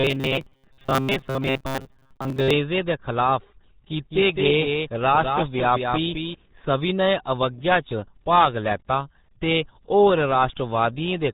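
The whole clip carries the heavy, muffled, gargly sound of the RealAudio 14.4 codec. Nothing gets through above about 4 kHz, and the smeared speech points to RealAudio 1 at roughly 8 kbit/s, the old dial-up speech codec squeezing everything into a tiny bitrate.

From 0.01 to 2.53 s the speech turns into a stiff, metallic buzz pinned at 133 Hz that still loosely tracks the syllables. That's robotic sound from repeated short buffers, likely caused by audio arriving too rarely so the player keeps looping the last slice, which fits a buffer around 7.5 ms long, repeated most of the time.

Between 4.10 and 6.34 s there's a doubled audio track: a second full-band copy trailing by about a fifth of a second, around 5 dB quieter, with no room colour, switching on and off abruptly. It's likely a second, slower capture path being mixed in alongside the original.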